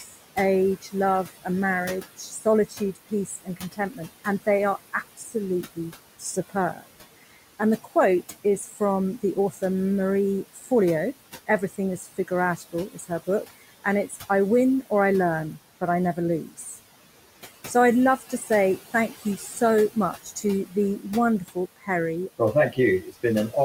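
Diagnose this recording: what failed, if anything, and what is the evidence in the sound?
The failure is in call processing. Noise suppressor artifacts run through the whole clip. The room noise, about 15 dB below the speech, is pulled down by about 16 dB in the gaps. It swells back under each phrase.

Speech is cut by the noise suppressor at 0 to 1.47, 2.17 to 6.87, 7.59 to 8.81, 10.55 to 10.7, 11.47 to 14.3, 15.81 to 16.78 and 17.74 to 23.54 s. Quiet sounds are mistaken for noise. They drop by about 8 to 18 dB and sound swallowed.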